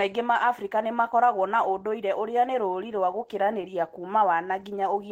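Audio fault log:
2.96–3.64 s, scattered short gaps: after "ũndũire ũrĩa nĩ rũũri", about five tiny packet losses, each patched by continuing prior sound, causing ticks; waveform shows brief repeated-cycle patches.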